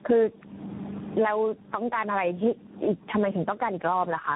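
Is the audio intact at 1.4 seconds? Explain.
No, not at 1.4 seconds, and not anywhere else in the clip either, since both problems run the whole way through.

First, there's gain pumping. The level keeps swinging, by about 25 dB. That pattern likely comes from gain set far too high at the mic, with a fast limiter or compressor clamping down on every peak. The result is squashed, breathing dynamics where loud and quiet parts sit unnaturally close together.

Second, there's tandem speech coding. The speech has passed through several speech codecs in a row, probably three, and each one re-encodes the damage left by the one before. The sound points to a chain of narrowband mobile and telephony coders, something like AMR-NB ending in CVSD. That's why it comes out rough, muffled and a bit warbly, with nothing above 3.8 kHz.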